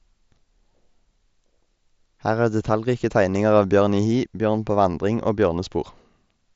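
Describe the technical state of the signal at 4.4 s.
At 4.4 s the speech is intact, carried cleanly through the Bluetooth mSBC headset path with its band ending just below 8 kHz.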